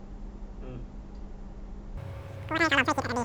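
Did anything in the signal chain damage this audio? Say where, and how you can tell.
Yes. From 1.97 s to the end, the speech turns high and hurried: a wrong sample rate at playback. Speed and pitch rise together, 2.76 times and 17.6 semitones, fitting 16 kHz audio played at 44.1 kHz. Spectrogram harmonics jump upward; the waveform looks time-squeezed.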